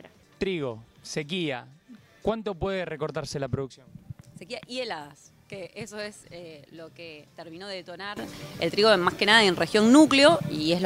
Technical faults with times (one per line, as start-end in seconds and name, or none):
8.17-10.86 sudden gain jump